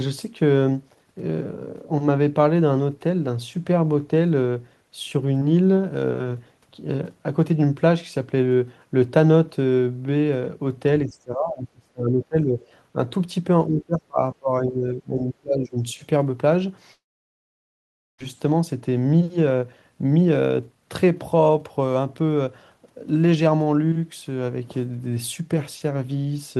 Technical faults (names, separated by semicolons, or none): speech suppressed in double talk; long network dropout; jitter buffer speed-up